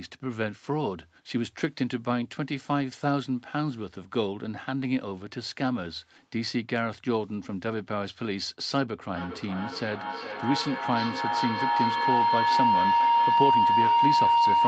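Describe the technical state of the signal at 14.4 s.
At 14.4 s a feedback howl is sounding. It began at 9.16 s and runs to the end. The mic-to-speaker loop gains level each pass, so it narrows to a tone around 1 kHz. The loop repeats about every 400 ms and the howl peaks about 5 dB above the speech.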